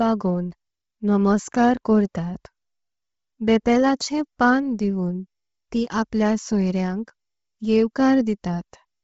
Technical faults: Bluetooth LC3 compression

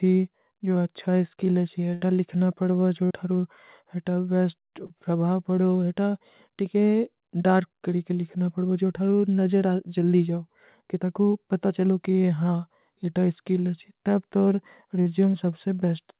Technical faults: burst of packet loss; short concealed packet loss

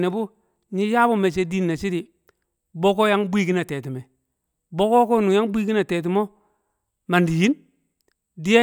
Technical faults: none

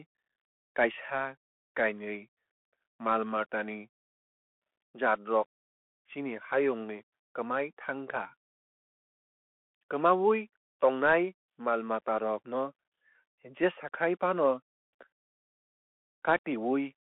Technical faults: Bluetooth CVSD headset codec

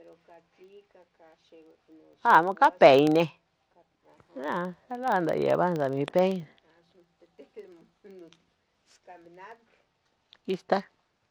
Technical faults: filter restarted on every block

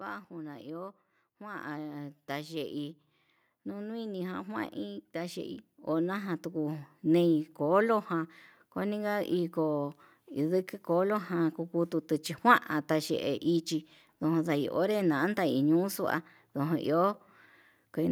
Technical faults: automatic gain rising

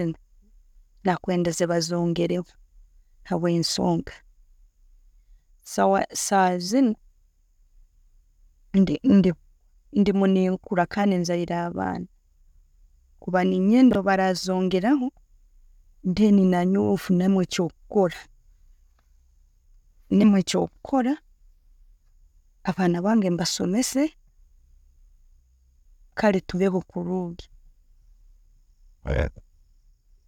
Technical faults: chunks out of order; damaged data in a compressed stream

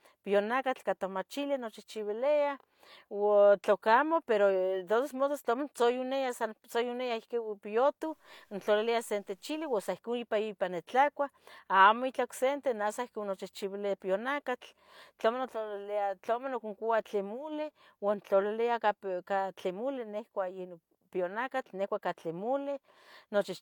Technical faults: low bit depth without dither

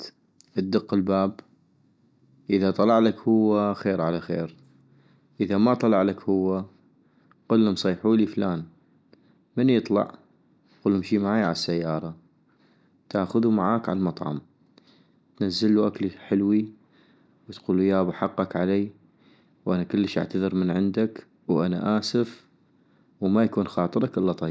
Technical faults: none

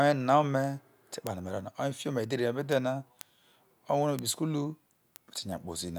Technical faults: word clock ticks

